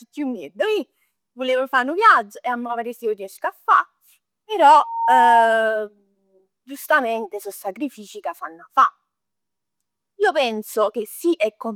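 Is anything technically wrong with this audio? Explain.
Yes. From 4.75 to 5.64 s there is loudspeaker feedback squeal. The microphone picks up its own loudspeaker, and at 918 Hz the loop gain exceeds one. That tone swells within about 0.4 s into a squeal roughly 5 dB above the speech.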